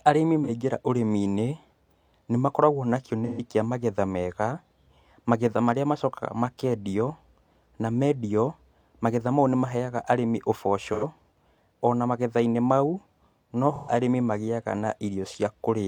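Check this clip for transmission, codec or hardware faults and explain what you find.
AAC frame loss with concealment occurs four times in the speech: at 0.44–0.50 s (about 43 ms), 3.25–3.42 s (128 ms), 10.93–11.04 s (85 ms) and 13.76–13.91 s (128 ms). These lengths fit one, three, two and three lost frames respectively. Each time, the decoder rebuilt the missing audio from the last good spectrum, so each gap sounds like a brief smeared, noisy patch.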